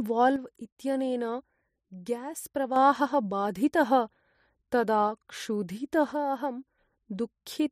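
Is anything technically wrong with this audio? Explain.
Yes. The likely cause is one channel dropping out: one side of a stereo source went silent, so the mono sum carries only the remaining channel. From 0.36 to 2.76 s the speech drops abruptly by about 6 dB, then returns to its earlier level. The same step down of about 6 dB occurs again from 6.12 to 6.78 s. During both stretches the sound keeps its character and only gets quieter, which fits both channels carrying the same signal.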